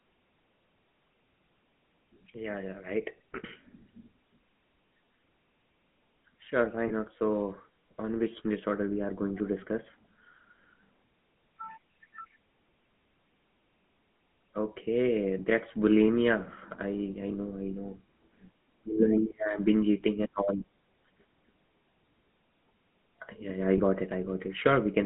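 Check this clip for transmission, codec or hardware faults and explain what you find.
The speech shows two faults: GSM full-rate codec coloration throughout, and two brief lost GSM frames.

The GSM full-rate codec is present for the whole clip, with plainly audible damage that fits a 13 kbps stream. The codec rebuilds the voice from a vocal-tract model driven by sparse, regularly spaced pulses, which gives a buzzy, gravelly roughness. On a spectrogram, energy sits between 150 Hz and 3.4 kHz with nothing above.

Lost GSM frames occur at about 6.88 s and 23.78 s, each fitting a single 20 ms loss. The decoder repeats the last good frame's settings, so the sound briefly holds as a rough, metallic ring. A spectrogram shows a short smeared, static slice, and the waveform shows a small repeated patch.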